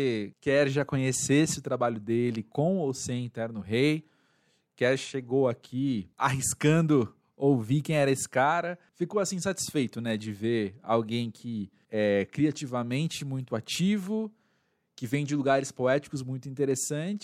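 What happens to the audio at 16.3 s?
At 16.3 s the speech carries on intact, with no dropout, click, distortion or other fault at that point.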